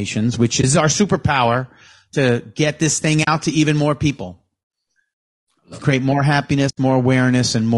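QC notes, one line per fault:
throughout: low-delay AAC compression. A low-delay codec, likely AAC-ELD at a bitrate around 32 kbps, codes the speech in frames of about 500 frequency lines with a low-delay window and leaves few bits to spare. The damage is plainly audible: the voice turns rough and grainy, noise fills the gaps between harmonics, and the top band sounds thinned or synthetic rather than natural.
0.61–0.64 s, 3.23–3.28 s, 6.69–6.78 s: AAC frame loss with muting. Coded frames went missing and the decoder filled their spectrum with silence. The overlapping windows fade the signal down and back up, so a single lost frame is a brief dip and a run is a soft-edged hole. The gaps are 20 ms just before "our superpower to get", 40 ms between "to get this thing" and "to even more people", and 80 ms right after "create more", which fits one, two and four lost frames.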